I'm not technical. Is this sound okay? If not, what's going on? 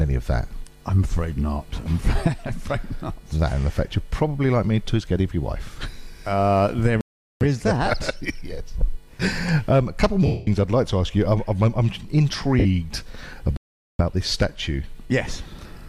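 No, there are two kinds of glitch in it.

The first is a playback stall. At 7.01 s the sound just stops dead for about 0.4 seconds, picking up again at 7.41 s. It happens again from 13.57 s to 13.99 s, a gap of about 0.42 seconds. Nothing is damaged during those gaps; it's simply silence. The likely cause is the player briefly running out of audio to play, or getting held up by something else on the device, and then catching up.

The second is lost LE Audio frames, a Bluetooth dropout. At 10.26 s about a fifth of a second of audio went missing on the wireless link, lasting until 10.47 s. A much shorter one hits at 12.59 s and lasts about 60 milliseconds. Instead of going silent, the Bluetooth receiver papers over the hole by replaying the last bit of sound it had with its details scrambled. That turns it into a brief hissy smear, and in the longer gap the smear fades away toward silence before the real sound returns.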